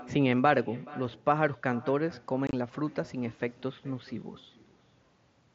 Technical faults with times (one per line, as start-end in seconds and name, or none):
0.00-5.55 echo with no canceller
2.47-2.53 unconcealed Bluetooth headset packet loss